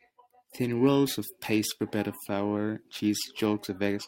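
Speech carries periodic clock jitter throughout: interference wobbling the converter clock at around 2 kHz adds sidebands at that spacing beside every component, giving a metallic edge on brighter sounds. Unlike random jitter's broadband hiss, it disappears completely in pauses.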